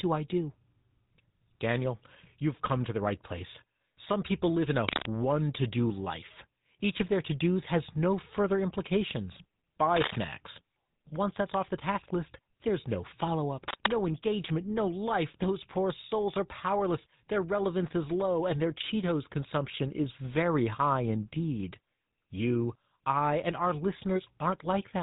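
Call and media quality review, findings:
GSM full-rate codec, throughout. Buzzy, gravelly roughness on the speech, plainly audible. Nothing above 3.8 kHz. The pulse-driven vocal-tract model throws away fine excitation detail, which fits a 13 kbps GSM full-rate stage in the path.

Cable scratch noise at 4.89–5.06 s (between "people live in" and "to do life"), 9.96–10.17 s (after "has no further implications"), and 13.63–13.94 s (between "list there's no follow" and "engagement no life"). Dense, ragged scratching bursts about as loud as the speech. Likely a worn cable or connector being moved, with contact resistance jumping.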